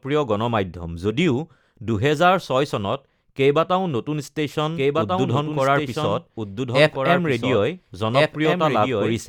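From 4.76 s to the end, a second copy of the speech runs underneath the first, trailing by about one and a half seconds and about 5 dB quieter, entering abruptly with no echo tail or room colour. This doubled audio track is likely from a slower capture path recording the same sound again.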